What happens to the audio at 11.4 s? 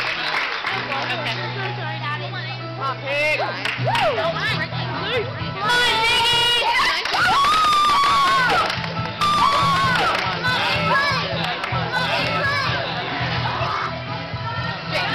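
At 11.4 s a doubled audio track is heard, from 9.21 to 13.67 s. A second full copy trails about one and a half seconds behind, nearly as loud. It is likely a slower capture path mixed in.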